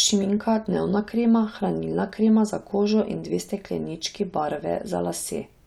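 No technical faults can be heard anywhere in this recording.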